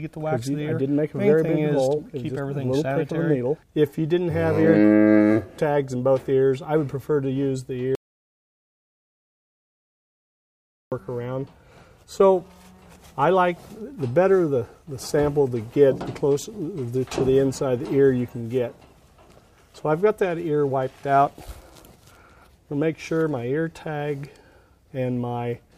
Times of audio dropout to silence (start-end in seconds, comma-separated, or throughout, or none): 7.95-10.92